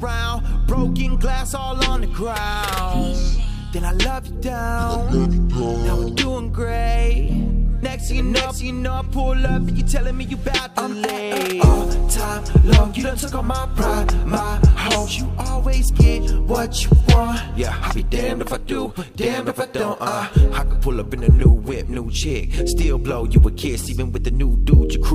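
Listening all the way through, nothing stood out as a technical fault anywhere in the audio.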